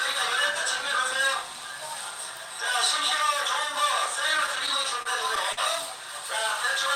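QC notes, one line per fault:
4.37–5.59 s, repeated stalls (stutter): eight brief hitches where the sound is held and stretched while the jitter buffer runs empty waiting for late packets, about 138 ms in all, none longer than 49 ms. Nothing is missing, unlike packet-loss dropouts, so the sound drags rather than skips.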